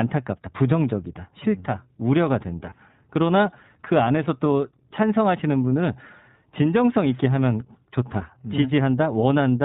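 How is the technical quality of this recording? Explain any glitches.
The technical quality is limited by plainly audible low-bitrate coding throughout, plus one brief dropout.

The whole recording has passed through the iLBC codec, which squeezes speech into standalone 20 ms frames in a narrowband channel; the sound points to its 15.2 kbps mode. Nothing above 4 kHz survives, so the speech sounds muffled and a little rough, with a synthetic edge.

From 2.70 to 2.73 s come lost iLBC frames. A packet of about 20 ms went missing, which fits a single dropped frame, and the decoder bridged it by repeating the last pitch cycle with added noise. It is heard as a momentary buzzy, held tone before normal sound resumes almost immediately.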